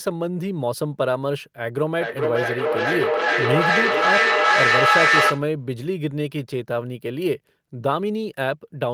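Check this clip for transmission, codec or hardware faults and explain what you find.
One fault is present, a feedback echo between two devices, from 1.98 to 5.51 s. The speech comes round again about every 0.4 s, each pass thinner and more ringing. The repeats pile up to about 6 dB above the speech instead of dying away, which points to a loop between two nearby devices on the same call, each echo canceller removing only its own playback. An ordinary single-device echo would fade rather than grow.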